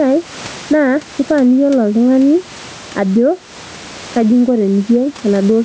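Throughout the speech, the gain swings by around 10 dB, and loud and quiet syllables sit squashed close together in level. This is gain pumping, likely caused by the microphone gain being set far too high so that a fast limiter or compressor keeps clamping down on each loud sound and releasing in the gaps. The room noise sits about 31 dB under the speech.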